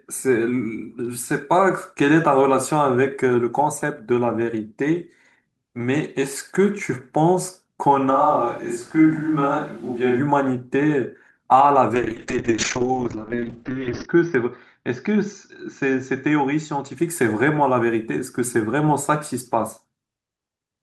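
From 8.12 to 10.18 s the speech suddenly turns roomy and hollow with thinner bass, likely a switch to a distant microphone; level holds steady, with faint room noise.

Then a call bitrate drop runs 11.95 to 17.01 s. The top end shrinks from 20 kHz to 6 kHz and it goes rough and watery, fitting roughly 32 down to 10 kbps.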